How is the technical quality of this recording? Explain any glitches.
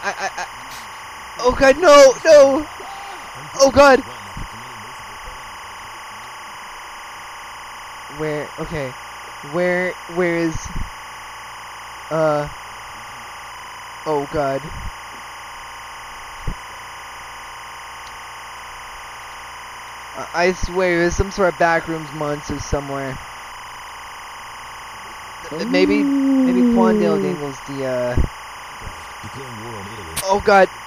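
The recording carries one fault that runs from start to finish. Timecode bleed, throughout: linear timecode at 25 frames per second leaks in from an adjacent line, its square wave flipping between roughly 1 and 2 kHz, leaving a steady chirping warble around 20 dB beneath the sound.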